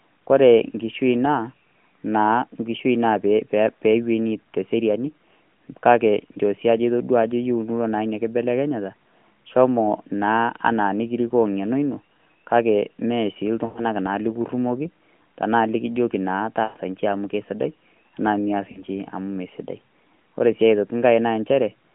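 Lost AMR speech frames occur three times: 13.66 to 13.85 s, 16.64 to 16.77 s, and 18.72 to 18.82 s. Radio errors corrupted each run of frames, so the narrowband decoder filled the gaps by repeating the last good pitch and vocal-tract settings at decreasing gain. The first two, about 100 ms and 120 ms of loss, sound smeared and drawn out, then fade toward silence. The shortest, about 40 ms, is briefly drawn out before the sound returns briefly weak or rough.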